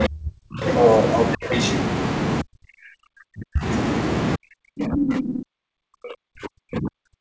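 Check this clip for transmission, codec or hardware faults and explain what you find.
Two echo-control faults alternate through this speech, and the wideband call path's top end stops at 8 kHz, which fits G.722.

Speech suppressed in double talk, at 0.0 to 0.64 s, 1.37 to 1.52 s, 2.42 to 3.66 s and from 4.36 s to the end: the talker is pushed down deeply, by up to roughly 40 dB. This is likely an echo canceller muting during simultaneous speech, and unlike codec dropouts the dips track the other party's talking.

The other side's voice leaks through at 0.68 to 1.34 s, somewhat louder than the talker, and at 1.51 to 1.76 s, slightly quieter. This is likely uncancelled loudspeaker echo. It differs from suppression because a second voice is added rather than the talker being taken away.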